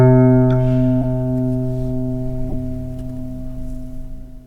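At 1.02 to 1.06 s and again at 2.49 to 2.54 s, a corrupt frame decoded produces a brief squeaky blip over the sound. Flipped bits in a few compressed frames led the decoder to misplace energy. Each burst shows as an isolated, smeared block on a spectrogram and a short spike in the waveform, the first fairly loud and the second weaker.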